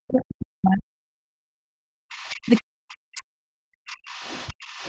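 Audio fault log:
0.00–2.02 s and 2.44–3.77 s: speech suppressed in double talk. The speech sinks by up to about 40 dB. The echo canceller likely muted it while both sides talked.
2.11–2.60 s, 3.16–3.20 s and 3.89–4.89 s: other side's voice leaking through. A second voice, about 25 to 35 dB below the speech, is heard. It is likely residual loudspeaker echo the canceller missed.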